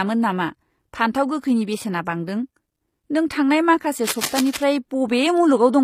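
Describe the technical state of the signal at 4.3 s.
At 4.3 s the signal falls inside a burst of cable scratch noise running from 4.04 to 4.64 s. The likely cause is a worn cable, connector or control carrying a DC voltage being moved, so its contact resistance jumps rapidly and injects dense, uneven noise bursts. It is heard as a scratching, rustling layer over the speech, sitting around 10 dB below the signal for that roughly 0.6 s stretch.

Underneath, the whole clip carries plainly audible HE-AAC compression damage, consistent with a low bitrate around 24 kbps. The treble is not the original. It is regenerated by spectral band replication, which copies lower bands upward under a coarse envelope, so harmonics fail to line up across the crossover. This most likely explains the gritty, metallic or lispy quality of sibilants.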